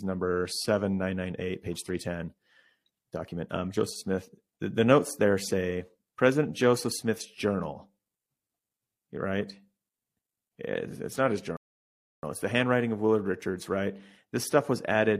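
At 11.57 s, right after "it's not his", a rebuffering stall halts playback for about 0.66 s until 12.23 s. The player ran dry of downloaded data, went silent, then resumed seamlessly at "it's the handwriting of". On a waveform or spectrogram it appears as a clean flat gap, with nothing missing on either side.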